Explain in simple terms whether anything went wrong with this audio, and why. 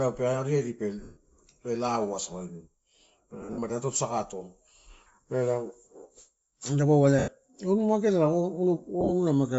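Yes, two things went wrong. Throughout, the speech has a breathy, grainy edge and dulled upper detail. That is likely Bluetooth LC3 compression: squeezed hard, the codec drops much of the high-frequency content and fills the gap with generated noise.

There are also four short dropouts of lost LE Audio frames: 1.03 to 1.17 s, 3.42 to 3.58 s, 7.19 to 7.28 s and 9.01 to 9.12 s. The receiver patched each gap by replaying recent sound with scrambled detail, so the speech briefly turns into a noisy smear. The second and fourth are broken up, with the longest runs roughly 50 and 40 ms.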